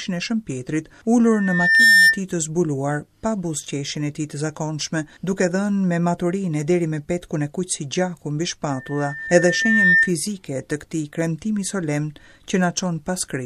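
At 1.24 s there's a loudspeaker feedback squeal. The mic is picking up the speaker it's feeding, and right around 1.8 kHz the loop gain tips past one, so that tone feeds itself. You hear a thin whistle swell up over most of a second to roughly 10 dB above the rest of the sound, then it drops out at 2.21 s. The same 1.8 kHz squeal comes back at 8.70 s, creeping up a bit more slowly, over about a second, before it cuts off at 10.14 s.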